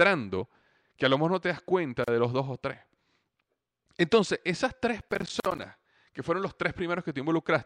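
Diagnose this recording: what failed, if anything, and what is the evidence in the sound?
The first fault sits at the codec or storage stage. It is a gap at a join of encoded pieces. The speech drops out for about 37 ms at 2.04 s and for about 47 ms at 5.40 s. Each silence has smeared edges. The speech resumes exactly where it stopped. The pieces were encoded separately and butted together untrimmed. The encoder's start-up delay and last-frame padding remain as dead air.

The second fault is at the driver or buffer stage. It is processor overload crackle. From 5.01 to 5.62 s a gritty tearing rides on the speech. It is made of many tiny silent holes with hard edges, perhaps fifteen of them. The holes fit a buffer of around 10 ms. The processor missed its deadlines repeatedly, and each late buffer was filled with silence. The 5.40 s join gap falls inside this burst. The crackle stops once the load eases.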